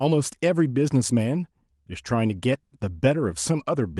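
Speech throughout, with no faults heard in the recording.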